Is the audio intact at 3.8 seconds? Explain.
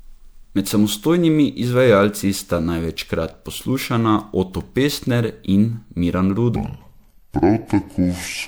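No. Generation loss spans the whole clip, including 3.8 s. Speech sounds swirly and hollow, likely from repeated MP3 re-encoding. The spectrogram shows patchy holes and smeared onsets.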